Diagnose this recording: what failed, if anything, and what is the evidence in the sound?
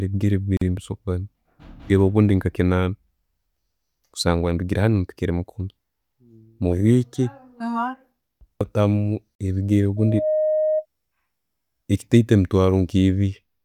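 Storage stage: separately encoded pieces were joined without trimming the encoder's start delay and end padding, leaving a gap at a join of encoded pieces. Speech drops out for 44 ms at 0.57–0.61 s and 40 ms at 9.35–9.39 s, with smeared edges, then resumes exactly where it stopped.

Analogue acoustic path: a microphone picked up the loudspeaker it feeds, and at 623 Hz the loop gain exceeded one, causing a loudspeaker feedback squeal. From 9.97 to 10.86 s a single 623 Hz tone builds over about a third of a second to roughly the level of the speech itself.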